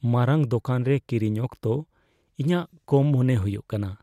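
Speech recording with no audible technical faults anywhere in the clip.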